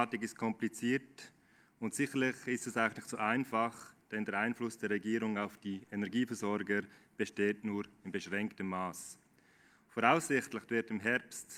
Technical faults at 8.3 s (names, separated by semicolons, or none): none